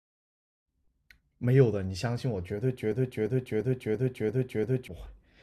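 At 2.92 s the speech locks into a broken-record loop until 4.88 s. A fragment of about 0.34 s repeats exactly, six times, back to back. A stalled player or stream likely kept resending its last buffer. The speech meant for that stretch is lost.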